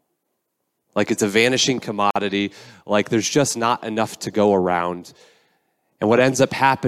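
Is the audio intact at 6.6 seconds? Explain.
Yes, at 6.6 seconds the audio is intact, with the speech carrying on without any dropout, click, distortion or other audible disruption.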